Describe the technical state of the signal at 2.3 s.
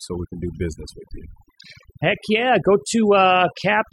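At 2.3 s the speech is caught in overdone noise removal, which runs the whole clip rather than starting or stopping near this point. A noise reducer set far too hard is pulling individual frequency bands down to nothing whenever they sit close to its noise estimate, taking quiet parts of the voice with them. The gaps fall to near silence sprinkled with twinkling specks. That flickering, band-by-band gating is what separates it from a plain low-pass, which dulls the sound evenly instead.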